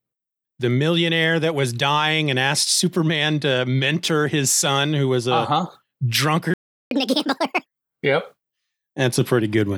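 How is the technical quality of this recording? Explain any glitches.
Two linked glitches stand out, both late in the clip.

A playback stall occurs from 6.54 to 6.91 s. The speech cuts out mid-flow for about 0.37 s, leaving dead silence. This likely comes from the player running short of buffered data or its output thread being briefly blocked, so nothing reached the output until it recovered.

Catch-up at higher speed follows immediately, from 6.91 to 7.66 s. To recover the lost time, the player resamples its backlog at 1.5 times normal speed, so the speech sounds rushed and raised in pitch by around seven semitones before snapping back to normal.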